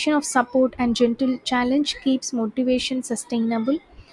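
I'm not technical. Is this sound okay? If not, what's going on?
Yes, it's fine: nothing in this recording sounds broken, so there's nothing here you need to worry about.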